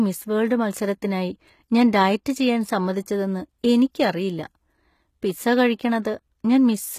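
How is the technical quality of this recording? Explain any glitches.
The technical quality is limited by plainly audible codec damage throughout the speech, plus one brief pre-echo near the end.

Throughout the clip, the treble sounds synthetic and stops at about 14.9 kHz, which likely comes from HE-AAC compression at a low bitrate, consistent with about 20 kbps. Spectral band replication copies lower bands upward, so harmonics don't align across the crossover, and s sounds come out gritty or metallic.

From 6.02 to 6.05 s, a short hiss lasting 26 ms precedes an attack. This is pre-echo: the codec spread quantisation noise, sized for the loud onset, across its whole block, so the noise fills the quiet gap beforehand and the attack sounds smeared.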